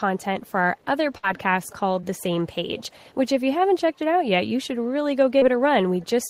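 A speech recording with three kinds of fault. Faint delayed copies of the voice return about 0.48 s late at 0.76–0.85, 1.35–1.40, 1.62–1.76, 2.77–3.15, 6.00–6.06 and 6.22–6.29 s. This echo leak is likely from a far-end loudspeaker whose echo canceller missed some pickup. A burst of packet loss hits 1.17–1.25 s: the last sound is held and faded for about 54 ms, then the audio jumps ahead, dropping about 60 ms. Short concealed packet loss causes brief smears at 2.01–2.04 and 5.38–5.43 s, where the receiver patched 17 and 31 ms gaps, losing 20 and 40 ms of audio.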